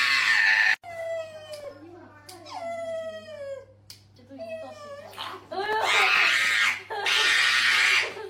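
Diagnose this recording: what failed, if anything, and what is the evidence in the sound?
Processor overload crackle at 1.60–1.78 s and 5.64–6.54 s in the driver buffer: few-millisecond buffers repeatedly missed their deadlines, leaving tiny silent gaps heard as gritty crackle.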